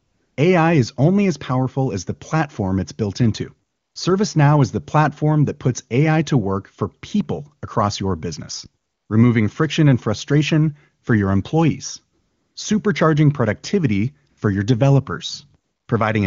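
Right at the start, from 0.00 to 0.37 s, you get AMR comfort noise. The phone decided nobody was talking, stopped sending speech frames, and the far end filled the gap with synthetic hiss built from a rough level and spectrum estimate. It comes back at 3.69 to 3.95 s after "platform it's built into", at 8.83 to 9.09 s, at 12.19 to 12.55 s between "frustration for your employees" and "supercharging productivity for your", briefly at 14.29 to 14.37 s between "your employees supercharging productivity" and "for your", and at 15.63 to 15.87 s. Each time the real room tone gets swapped for a smooth, even noise that clicks in and out. The speech is carried over AMR wideband (HD Voice), which sounds clean, consistent with its top rate.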